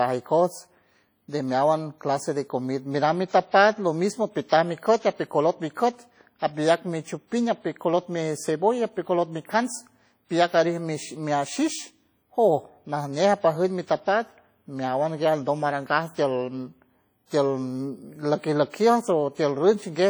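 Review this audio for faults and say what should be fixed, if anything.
Throughout the speech, the audio has likely been through WMA compression at a low bitrate, consistent with around 32 kbps. The transform encoder works in long blocks, so its quantisation noise smears over tens of milliseconds around each sound and weak spectral lines are discarded. The damage is heavy: a ringing, washy quality with a hiss that rises and falls with the speech, even though content still reaches up to about 20.1 kHz. To prevent it, keep an uncompressed or high-bitrate master and encode from that rather than from a low-bitrate WMA copy.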